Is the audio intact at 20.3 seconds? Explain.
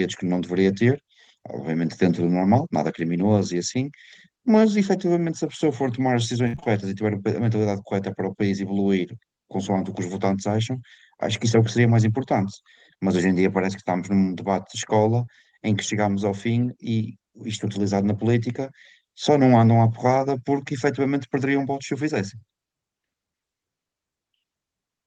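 Yes, the speech at 20.3 seconds is intact, with no fault at that moment beyond the ordinary character of the call codec it passed through.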